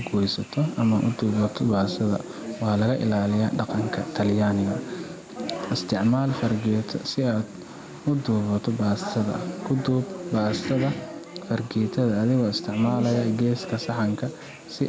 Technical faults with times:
0.00-14.88 gain pumping

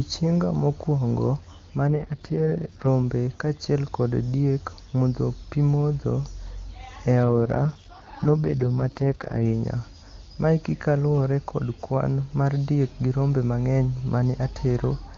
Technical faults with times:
1.88-2.87 AMR rate drop
7.24-9.45 AMR rate drop

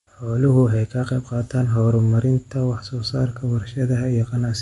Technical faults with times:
0.00-4.62 MP3 compression
3.10-4.62 mains hum

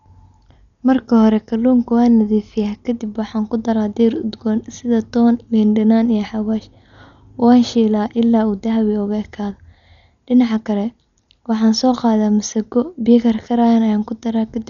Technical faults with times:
0.00-14.70 Dolby Digital compression

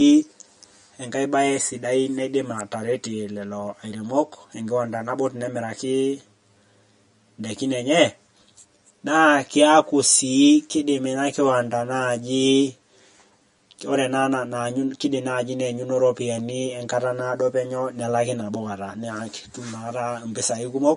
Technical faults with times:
0.00-20.96 channel delay (comb filtering)
0.00-20.96 MP3 compression

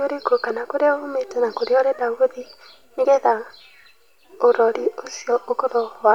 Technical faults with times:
none

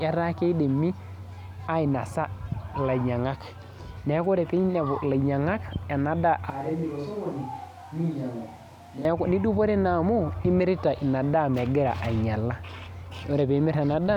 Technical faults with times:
6.50-9.05 switch to a distant microphone

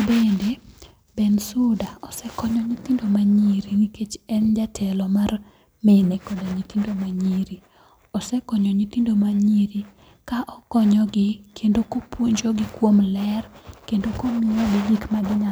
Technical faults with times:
none

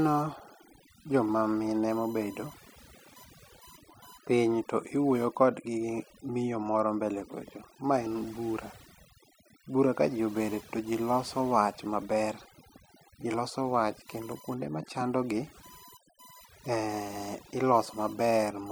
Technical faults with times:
0.00-18.71 USB whine
0.00-18.71 overdone noise removal

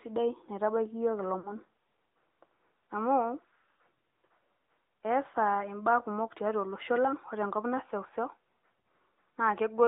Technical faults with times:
0.00-9.87 AMR narrowband mobile codec
1.40-1.54 lost AMR speech frames
8.83 lost AMR speech frames

